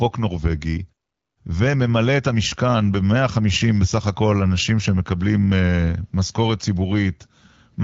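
No technical faults can be heard in this speech.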